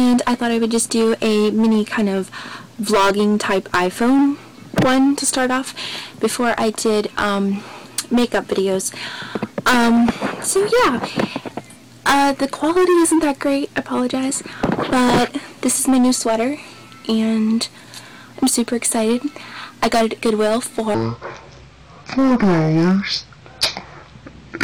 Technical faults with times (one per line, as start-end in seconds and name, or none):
0.00-24.64 hard clipping
20.94-24.64 section at the wrong speed